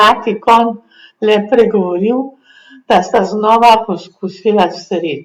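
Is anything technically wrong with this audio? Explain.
Yes. Hard clipping occurs at 0.48 to 0.61 s, 1.31 to 1.62 s and 2.91 to 3.75 s, where the speech exceeds what the signal chain can pass, by about 7, 4 and 9 dB. Peaks are sliced flat, adding high harmonics, so the loud syllables crackle or turn into a harsh fuzz, roughest in the longest and heaviest final stretch.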